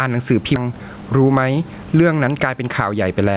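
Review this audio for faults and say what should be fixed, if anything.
Gain pumping runs through the whole clip, with a swing of about 15 dB. That's likely mic gain set far too high with a fast limiter clamping it. Drop the input gain and ease off the limiter's attack so it isn't constantly grabbing.

There's a skip ahead between 0.56 and 0.58 s. Playback jumps straight forward with no filler, and something like 0.7 s of speech is simply gone, with both sides butted together. Later audio was already queued, so the dropped chunk shortened the delay by about the same amount. Giving the jitter buffer more headroom, so it doesn't overflow and discard queued audio, would prevent it.

Right after that, from 0.66 to 3.08 s, there's a jitter buffer speed-up. The speech runs about 9% fast at unchanged pitch, sounding a bit hurried. The receiver trimmed short pitch-period slices over and over, shaving roughly 200 ms to pull its excess delay back down. 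Smoothing out the bursty packet arrival, or letting the buffer drain more gently, would prevent it.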